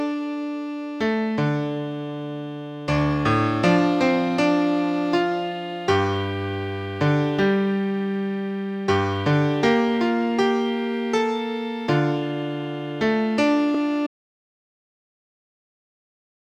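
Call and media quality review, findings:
Repeated frames, 13.74–13.78 s. Brief stutter: one 32 ms block plays twice in a row. Probable component: encoder output or packet writer duplicating a frame. Timeline stretched by 32 ms.

Audio dropout to silence, 14.07 s to end. Sound cuts off mid-flow to silence, no room tone underneath, and never returns. Likely cause: capture input lost, via device disconnect or link failure, while the recorder kept writing silence. Remaining content missing.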